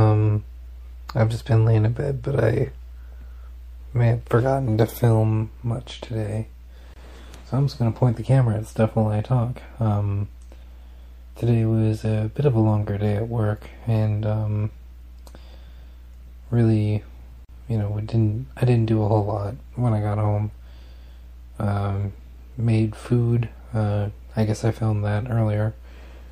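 From start to end, the sound has a watery, swirling quality. The treble is cut off sharply, and faint detail flickers in and out. Attacks sound smeared. This is likely MP3 compression, and the damage is plainly audible. With too few bits, the encoder drops the top band and zeroes weak frequency lines. Those lines switch on and off from frame to frame. This fits a low bitrate such as 64 kbps.

At 6.94 s, the sound breaks off into a short silence lasting 25 ms. At 17.45 s, a second silence of 42 ms opens. Each is a gap at a join of encoded pieces. The pieces were encoded separately and joined without trimming. So the encoder's start-up delay and its padded final frame stayed in. The edges of each gap are smeared by the codec. The sound then resumes where it stopped.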